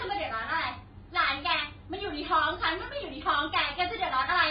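Throughout the speech, nothing is present above 5 kHz, leaving it dull and smeared, with a warbling, fizzy texture on sibilants and held sounds. This heavy damage is likely AAC compression, with AAC-LC quantising spectral lines coarsely, which fits a bitrate near 16 kbps.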